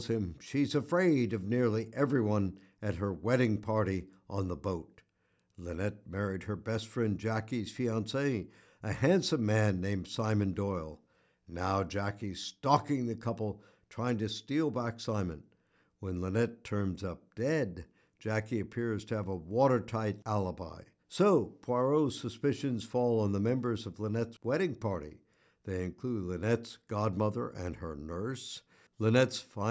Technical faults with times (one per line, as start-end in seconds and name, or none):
none